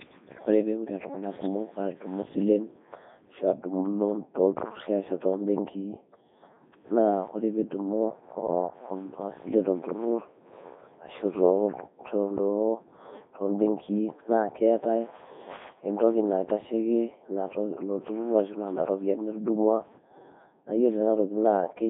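Throughout, the speech carries heavy Codec 2 vocoder damage: resynthesised from sine waves, it sounds robotic and buzzy, which fits roughly 3.2 kbit/s, band-limited to 200 Hz–3.7 kHz, nothing above 3.8 kHz.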